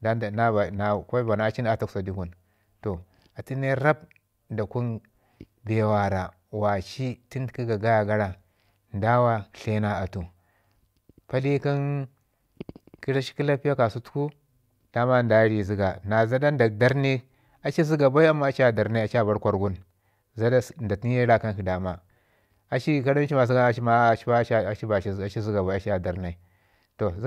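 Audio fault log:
No faults are heard anywhere in the speech recording. There is nothing to log against any time.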